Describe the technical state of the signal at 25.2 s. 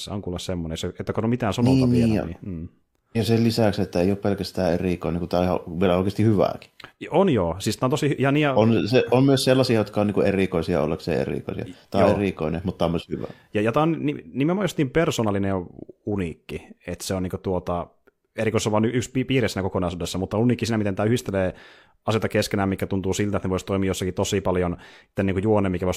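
At 25.13 to 25.18 s the speech jumps ahead with a small blip, a stream segment skipped: one segment likely failed to load and playback resumed at the next. The waveform breaks abruptly, and the spectrogram shows a thin vertical broadband stripe at the join.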